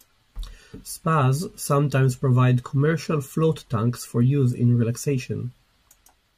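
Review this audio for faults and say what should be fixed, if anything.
Nothing stood out on listening to this speech recording, so there is nothing here that needs fixing.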